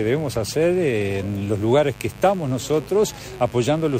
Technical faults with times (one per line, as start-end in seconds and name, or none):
0.00-3.99 mains buzz